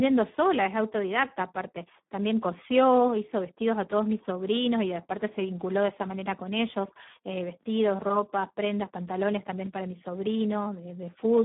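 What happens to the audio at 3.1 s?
At 3.1 s, as through the whole clip, the speech carries Speex codec damage. Too few bits for the excitation, consistent with about 8 kbps, make it heavily hoarse and noisy, confined to a narrow 150 Hz to 3.6 kHz line band with nothing above 3.8 kHz.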